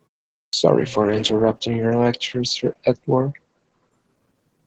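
At 0.47 s the speech starts abruptly out of silence, its opening sounds missing for about 61 ms until 0.53 s. This is a clipped start after a pause: during the roughly half-second of silence before it, the output device went idle, and it needed time to wake and lock again before sound could pass. The first fraction of the speech was swallowed.

From 0.78 s to the end of the clip, the speech loses its brightness and turns muffled and rough, with a watery coarseness at its worst for about 1.9 s. This is a call bitrate drop. The bandwidth estimate fell and the encoder was pushed from 32 kbps down to 10 kbps. At that rate it codes more coarsely and cuts the audio band from 20 kHz to 8 kHz, removing the upper frequencies.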